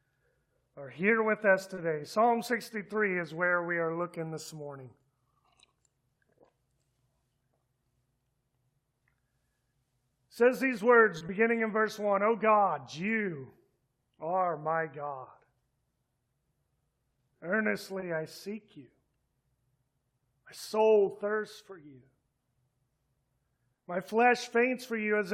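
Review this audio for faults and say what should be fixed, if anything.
Three short stalls from a late packet occur at 1.75–1.79 s, 11.18–11.23 s and 18.00–18.04 s. In each case the next packet had not arrived when playback needed it, so the jitter buffer ran dry and the receiver held the last sound for about 20 ms, 30 ms and 20 ms respectively. Playback then resumed from where it stopped, so no audio is lost, but each spot has a brief held stretch, and end-to-end delay grows by the same amount each time. To prevent this, let the adaptive jitter buffer keep a little more headroom so that late arrivals of 20–30 ms are absorbed.

One short concealed packet loss follows shortly after the second stall, at 11.27–11.31 s. About 20 ms of audio never reached the decoder in time and is missing. The receiver covered the gap by extending the preceding sound and blending back into the real signal, which is heard as a brief smear or wobble. 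Coming just 40 ms after the stall, it points to a burst of network trouble around 11.2 s. To prevent it, add forward error correction or redundancy, and address the packet delay and loss on the network path.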